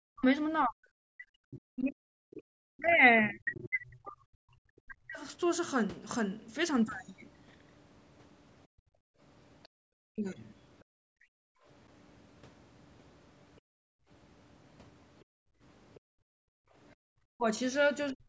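Speech suppressed in double talk, 0.08 to 5.21 s: the speech dips by as much as about 40 dB for roughly four seconds in total, likely because the echo canceller turned down both sides while they talked at once. Other side's voice leaking through, 1.54 to 3.69 s: a second voice, about 20 dB below the speech, is likely loudspeaker echo the canceller left in the microphone. Background gated by the echo canceller, 2.42 s: the room sound drops about 33 dB for roughly 70 ms as the canceller clamps the microphone. The same gating returns between 8.67 and 11.65 s, about 33 dB deep and around one second in total. Within that span, at 9.63 s, a faint scrap of the other voice leaks through about 35 dB below the speech, likely residual echo. Speech is suppressed again between 10.13 and 11.27 s, dropping about 35 dB for roughly 150 ms in total, likely double-talk suppression. Gating follows from 13.6 to 17.0 s, about 34 dB deep and roughly 1.5 s in total. 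From 17.28 s to the end, the speech is pulled down by about 40 dB for around 400 ms, likely the canceller suppressing double talk once more.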